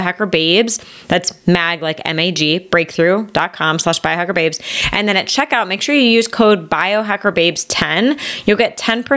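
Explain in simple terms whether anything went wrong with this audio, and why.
Gain pumping runs through the whole clip, from start to finish. The level is pulled down sharply the moment the speech gets loud, in a big swing, so loud and soft parts end up closer in level and the sound is squashed. The likely cause is the microphone level set far too high, with a fast automatic limiter yanking it down on each loud sound. Unlike a noise gate, which cuts the background to silence in the gaps, here the level is squashed down on the loud sounds.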